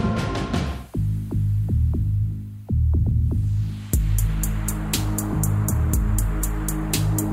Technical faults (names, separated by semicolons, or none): none